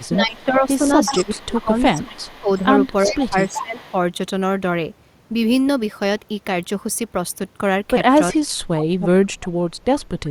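Right from 0.00 to 0.44 s there's a faint echo leak, a copy of the speech trailing by 378 ms, which is likely the far end's loudspeaker sound getting past its echo canceller. Overlapping that, from 0.16 to 2.75 s, the speech dips by up to about 20 dB in patches: speech suppressed in double talk, likely the canceller ducking everything while both sides talk. The echo comes back much stronger from 1.05 to 2.29 s and again from 2.84 to 3.93 s, with a second round of suppression from 3.06 to 3.94 s, up to about 15 dB down. A brief echo scrap shows up at 8.33–8.38 s, then the deepest suppression hits from 8.50 to 9.66 s, knocking the speech down by about 35 dB. A faint echo trails in again from 9.98 s to the end.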